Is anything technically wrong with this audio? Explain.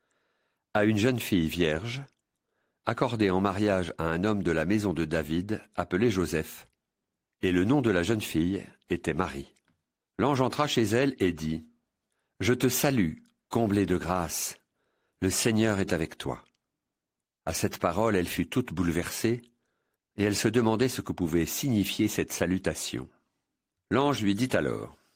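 No, no technical faults.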